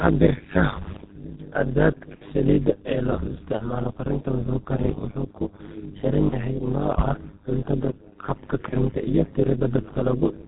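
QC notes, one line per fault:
Throughout: overlap-add ripple. Frames rejoin with uneven gain, so the level dips by about 60 dB around 100 times a second.
Throughout: G.723.1 codec. Speech is muffled, with nothing above 4 kHz, and hoarse, with smeared consonants. This points to heavy coding near 6.3 kbit/s.
2.15–2.24 s, 6.29–6.35 s, 8.69–8.75 s: VoIP packet loss concealed by the speech codec. The decoder stretches its last sound into a fading buzzy tone or coloured noise. This happens just before "saliidda ee", just before "yahay nooca cuntada habka", and just after a later "yahay nooca cuntada habka".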